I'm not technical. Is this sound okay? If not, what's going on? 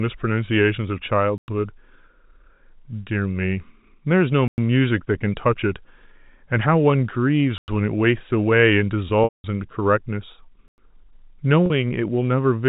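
No, not quite. There are two separate problems.

The first is a gap between chunks. The audio seems to have been delivered in pieces about 3 seconds long, and at each join there's a short hole of silence, about a tenth of a second. You'll hear it at 1.38, 4.48, 7.58 and 10.68 seconds. Nothing is actually missing. The speech just gets interrupted at each join, so it sounds like a regular little stutter.

The second is packet loss with pitch repetition. Bits of the stream went missing, and the playback filled each hole by repeating the last tiny slice of voice, fading it out. At 9.24 seconds, about 0.2 seconds was lost, so you hear a held, buzzy sound that fades before the speech comes back. At 11.66 seconds the loss is much shorter, about 0.04 seconds, and comes across as a brief buzzy hiccup. The slightly narrow, phone-like tone throughout comes from ordinary telephone coding and isn't one of these problems.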